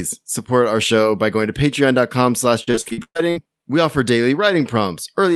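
From 2.63 to 3.38 s, right before "we offer", there's repeated packet loss with that robotic sound: nine gaps, the longest 116 ms, each patched by stretching the last bit of audio. About half the stretch is filler, so it comes out choppy.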